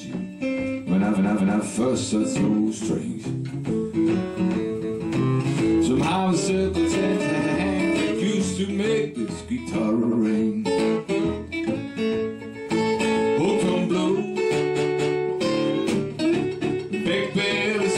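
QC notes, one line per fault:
1.14–1.60, 4.81–4.99, 7.41–7.55, 10.01–10.20, 12.43–12.56, 14.75–15.21, 16.60–16.88 s: repeated frames. Stutters come from blocks of 232, 186, 139, 93, 139, 232 and 279 ms replayed (the 93 ms and both 232 ms blocks twice extra), adding about 1.86 s. On a spectrogram or waveform, identical segments sit back to back.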